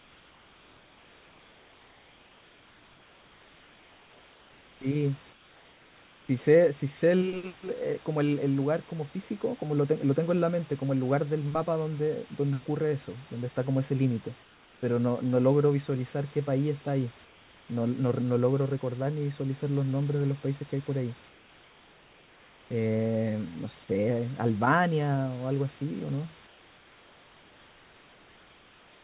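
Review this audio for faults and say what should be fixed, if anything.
Comfort noise in place of the background occurs at 0.00–4.81, 5.33–6.29, 14.43–14.83, 17.25–17.69, 21.29–22.71 and 26.47–29.03 s. In each pause the real room background gives way to a smooth, featureless hiss about 2 to 3 dB quieter. The likely cause is discontinuous transmission: the receiver synthesises noise while the sender's voice detector hears no speech. Disabling DTX on the sending side keeps the true background flowing through the pauses.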